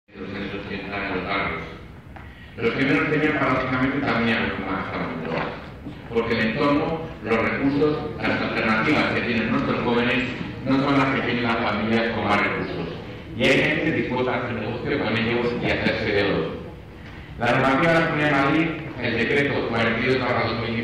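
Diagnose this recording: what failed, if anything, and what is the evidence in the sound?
Hard clipping runs through the whole recording. The signal was driven about 8 dB past what some stage in the chain could pass, whether a converter, a sample-format conversion or another gain stage, so its peaks were cut flat. Because under one percent of samples exceed that limit, the damage is confined to the loudest moments, where it is heard as crackle. On a waveform those peaks show squared-off tops. On a spectrogram each one shows as a brief vertical smear of added harmonics reaching high up the spectrum.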